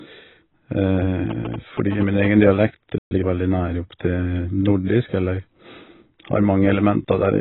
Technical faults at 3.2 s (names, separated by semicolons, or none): AAC compression; playback stall; time-compressed catch-up